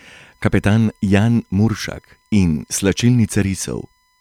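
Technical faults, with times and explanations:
Throughout: USB whine, a steady 1 kHz tone about 45 dB below the speech, from USB bus current drawn in 1 ms frames leaking into the audio ground or supply.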